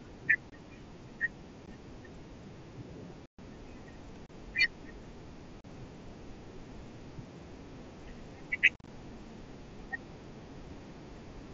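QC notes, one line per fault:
0.50–8.88 s, unconcealed Bluetooth headset packet loss: holes with hard edges at 0.50–0.52, 1.66, 3.26–3.39, 4.26–4.30, 5.61–5.65 and 8.74–8.88 s. They last 15 ms to about 128 ms, and the 3.26 s gap is the longest. At 8.74 s the drops are scattered over 135 ms, with the longest run at 45 ms, so that stretch sounds chopped and crackly. Each gap fits whole 7.5 ms frames going missing on the link over the mSBC path with nothing filled in, so the sound cuts to silence or an idle pattern with abrupt edges.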